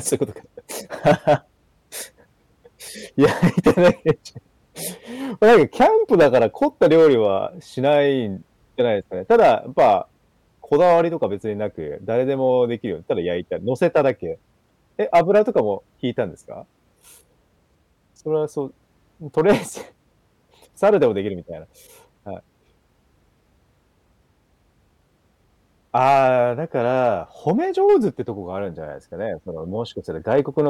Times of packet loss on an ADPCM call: none

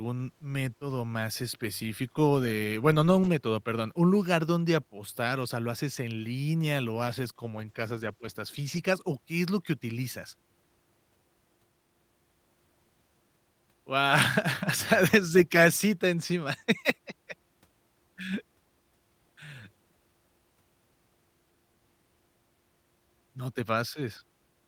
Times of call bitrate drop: 7.10-8.89

